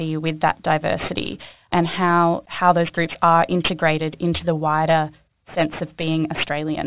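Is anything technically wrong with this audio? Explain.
Yes. Aliasing runs through the whole speech clip. The audio sounds like it was taken down from a high rate to a much lower one, which fits a move from 48 kHz to 8 kHz, without an anti-alias filter first. Content above the new 4 kHz folding point reflects back into the band at wrong, unrelated frequencies, roughly 15 dB below the speech. Sibilants come out gritty and metallic. On a spectrogram, energy presses hard against the 4 kHz ceiling, with mirrored, misplaced streaks below it.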